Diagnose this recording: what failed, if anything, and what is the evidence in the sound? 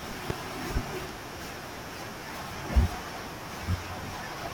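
Two loud pops sit over the speech at 0.30–0.33 s and 2.94–2.97 s, about 20 dB and about 10 dB above the signal, which continues underneath. This points to a voltage pulse entering the analogue wiring, likely from a connector or switch.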